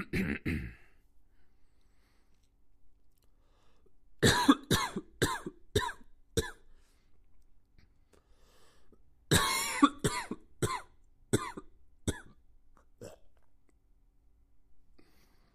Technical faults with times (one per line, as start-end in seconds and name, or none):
none